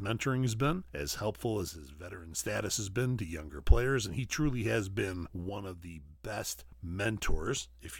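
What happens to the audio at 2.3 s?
At 2.3 s the sound is inside a one-channel dropout lasting from 1.69 to 2.39 s, between "been as helpful as" and "has been to younger". The speech drops abruptly by about 6 dB, then snaps back at 2.39 s. The likely cause is one stereo channel going silent. Once the channels are summed to mono, material shared by both arrives at half its level, and anything carried only by the missing side vanishes.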